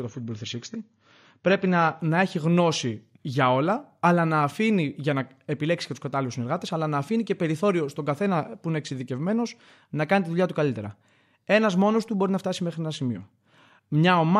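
Speech opening as an adaptive stream starting at a low bitrate: until 2.0 s, content above 7 kHz is missing and codec artefacts are stronger, fitting a low-rate AAC version. Before "να έχει γνώση για", a spectrogram shows the treble band abruptly filling in, without gap.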